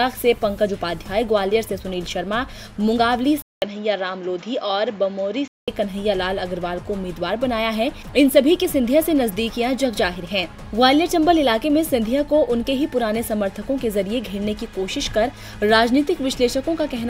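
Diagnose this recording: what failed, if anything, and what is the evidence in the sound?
A 200 ms gap at 3.42 s. Then nothing above 7.4 kHz, quieter, new noise, until 5.68 s. Likely an input switched to a poorer device.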